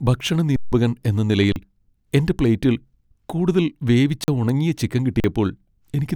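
The speech freezes on a flat, held level four times: for 160 ms at 0.56 s, then for 40 ms at 1.52 s, 4.24 s (after "എന്റെ പ്ലേറ്റിൽ കൂടുതൽ വേവിച്ച") and 5.2 s (after "കൂടുതൽ വേവിച്ച ഉണങ്ങിയ ചിക്കൻ"). These are underruns with held sample. The output buffer ran dry, the converter held its last value, and roughly that much speech was lost.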